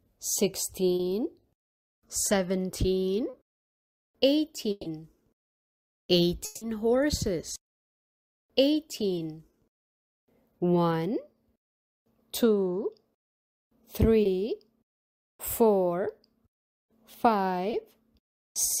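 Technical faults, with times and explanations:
0.95–1.01 s, 3.29–3.35 s, 14.23–14.27 s, 17.71–17.75 s, short concealed packet loss: 40, 40, 20 and 20 ms of audio never arrived and were replaced by extrapolation, heard as brief smears or wobbles.
4.71–4.87 s, burst of packet loss: 140 ms went missing in a row, so the decoder stretched the last sound into a fading buzz or hiss before the audio resumed further on.
6.45–6.63 s, long network dropout: a 160 ms stretch is replaced by a sustained, decaying continuation with no full silence, likely from a network dropout, and the sound picks up later without the lost part.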